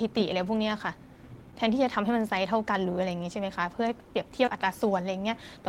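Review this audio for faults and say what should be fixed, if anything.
Short concealed packet loss occurs twice back to back, at 4.45–4.49 s and 4.49–4.53 s. Each time 20 ms of audio arrived too late. The decoder extended the preceding sound and blended back, leaving a brief smear. A deeper jitter buffer or forward error correction would prevent it.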